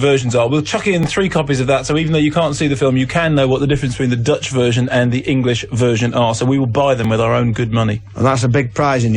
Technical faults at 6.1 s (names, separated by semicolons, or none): none